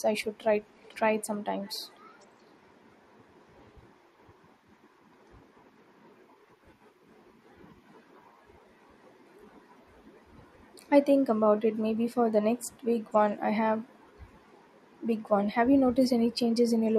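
Echo leak at 0.74 to 1.27 s and again at 1.64 to 2.3 s: a faint delayed copy of the speech trails the original by about 505 ms. The first scrap sits roughly 20 dB below the voice, and the second is fainter still, around 30 dB down. The likely cause is a far-end loudspeaker whose echo canceller let part of what its microphone picked up slip through and be sent back.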